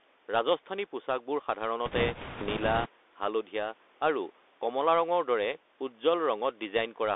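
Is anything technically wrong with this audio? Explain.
Yes, there are two faults in this speech clip.

The Bluetooth CVSD headset codec, throughout: one-bit delta coding with an adapting step squeezes the speech into roughly 300 Hz to 3.6 kHz, so sibilants turn scratchy over a granular hiss.

Bit errors on a Bluetooth voice link, from 1.86 to 2.89 s: flipped bits, at a rate of about five percent, each nudge the step slightly and fade, adding a rushing crackle rather than sharp clicks.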